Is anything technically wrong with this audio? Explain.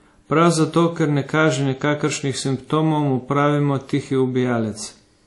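Yes, there are two faults.

Transcoding between lossy codecs runs throughout the speech. Nothing is heard above 11.3 kHz. The artefacts of two codecs are stacked together. This is likely a WMA encode re-encoded as MP3, both at low bitrates around 48 kbit/s. Each pass added its own damage.

Channel delay (comb filtering) starts at 1.33 s, just after "zato ker ne", and lasts to the end. One channel is late by roughly one sample. When the two are summed, the first cancellation notch falls near 20 kHz. The highs roll off, so the top of the speech turns dull.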